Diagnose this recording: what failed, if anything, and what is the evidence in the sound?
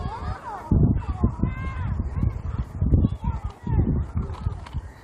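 The network and jitter buffer stage failed. At about 0.97 s to 1.14 s the sound skips ahead. Roughly a second of audio is gone, and the two sides are butted together with no fill. Late audio was dropped so playback could jump to what was already waiting.

The jitter buffer speed-up runs from 1.55 s to the end. The sound plays about 4% fast at unchanged pitch. The buffer was holding too much, so it trimmed many short pitch-period slices, roughly 150 ms in total, to cut delay.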